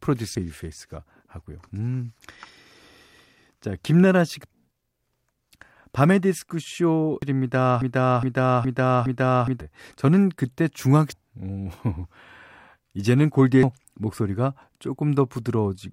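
Short chirps and blips cut through the speech at 0.35, 4.44 and 7.22 s. This is damaged data in a compressed stream: corrupted bytes make the decoder misread frames, lose sync and jump to the next valid frame header.

From 7.82 to 9.61 s, a fragment of about 0.42 s repeats four times back to back, and the speech that should have filled that span is lost. This broken-record loop likely comes from a stalled player, encoder or stream resending its last buffered piece.

Two more chirps of the same kind follow at 11.12 and 13.63 s, again from corrupted compressed frames that force the decoder to resynchronise.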